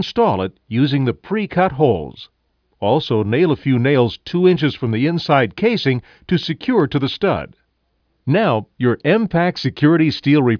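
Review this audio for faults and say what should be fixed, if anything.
Nothing here needs fixing, as there's no fault to point to anywhere in the clip.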